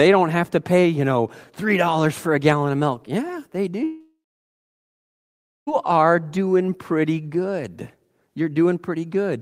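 Long network dropout, from 3.83 s to 5.69 s: the speech stops and the last sound is stretched into a fading buzz, then about 1.5 s of near silence follows before the audio resumes at "are doing pretty good". Roughly 1.84 s of speech never returns. This is likely a break in packet delivery, with the receiver padding the gap by extending its final sound until that fill decays away.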